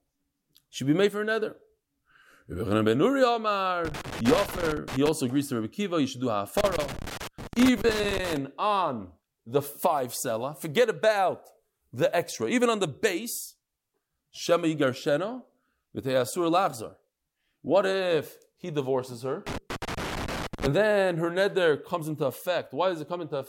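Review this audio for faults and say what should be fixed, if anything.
A worn or dirty contact in the cable path is making and breaking as it shifts, chopping the signal. This causes loose connector crackle: irregular scratchy bursts at 3.85–5.09 s (before "agrees to"), 6.57–8.37 s (between "you should do" and "on the five seller"), and 19.47–20.67 s (before "then her neder comes"). Clean or replace the suspect connector and secure the cable so it cannot move during recording.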